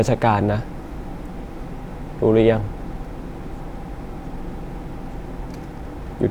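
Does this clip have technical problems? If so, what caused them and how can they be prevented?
No, there are no technical problems to report here.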